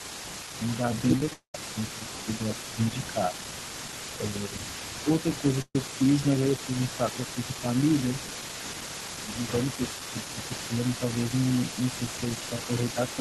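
Speech runs through the whole recording with a faint delayed copy of itself trailing about 380 ms behind, roughly 15 dB below the main voice. This is an echo leak, most likely from a loudspeaker on one end whose echo canceller let part of the sound back into its microphone. On a spectrogram it appears as a weaker, time-shifted ghost of each speech harmonic pattern. In the waveform, small bursts of energy follow each syllable by that fixed offset.

Several stretches show speech suppressed in double talk, likely the canceller turning down the near talker while the far side is also active: 0.58 to 3.35 s, 4.13 to 5.43 s, 6.65 to 7.66 s, 9.06 to 11.02 s, and 12.36 s to the end. The first stretch dips deepest, about 10 dB, over roughly a second in total. The others dip about 5 dB, visible as brief sags in the waveform envelope and dimmed bands on the spectrogram.

Between 1.16 and 1.32 s, repeated packet loss gives a robotic, choppy texture. 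Five short gaps, the longest 14 ms, are patched by continuing the preceding sound, so about a third of that span is concealment. A spectrogram shows smeared, repeated vertical slices instead of clean speech detail.

Straight after, from 1.33 to 1.55 s, comes a long network dropout, likely a stall in delivery. About 210 ms of audio is lost. The last sound is held and fades to silence for roughly 90 ms before speech returns further along. This reads as a flat, decaying stripe and then an empty gap.

At 5.62 to 5.76 s, a burst of packet loss removes about 120 ms. The last sound is stretched and dies away, with about 40 ms of silence, and then speech resumes mid-flow. It looks like a short blank notch in the waveform with a smeared, fading edge on the spectrogram.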